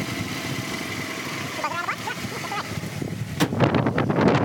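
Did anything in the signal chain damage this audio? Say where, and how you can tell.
Yes. The damage sits at the sample-format conversion stage and runs throughout. Everything plays at twice the speed and a full 12 semitones, an octave, too high. That is audio read two samples at a time: sample pairs were taken as single frames.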